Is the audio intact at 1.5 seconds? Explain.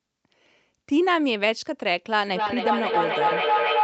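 Yes, the audio is intact at 1.5 seconds, with no dropout, glitch or other fault at that moment.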